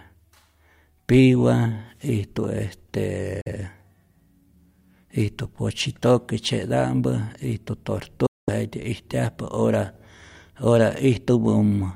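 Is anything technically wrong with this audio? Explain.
Yes, the speech has two brief gaps that are most likely Bluetooth dropouts. The first runs from about 3.41 to 3.48 s and the second, longer one from 8.26 to 8.50 s. Packets of audio arrived too late at the headphones, were discarded, and the output fell silent until fresh data came, then resumed further on as though playback never paused. Each gap sounds like a sudden cut or a very quick fade into silence. On a waveform it shows as a flat line with abrupt or briefly faded edges, and on a spectrogram as a clean vertical blank band across all frequencies.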